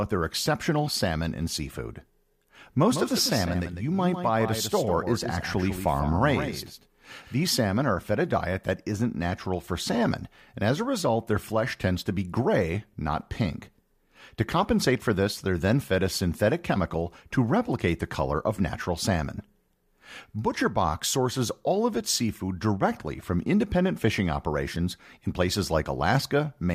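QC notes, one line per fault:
2.91 to 7.47 s, doubled audio track: the same signal is likely reaching the mix twice, once through a slower path, so a second full-band copy trails the original by roughly 150 ms at around 10 dB below it. That gap is too long to fuse, so every syllable gets a clean, dry slapback with no room decay. The echo starts and stops abruptly at the edges of the span, starting just before "salmon are fed a".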